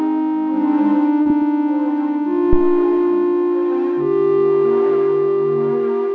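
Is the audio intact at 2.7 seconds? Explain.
No. At 2.7 seconds the clip sits inside a phantom power thump running from 2.53 to 2.91 s: a supply switched on or off on a live input sends a voltage step through the coupling capacitors, producing a deep low thump that decays in about 86 ms.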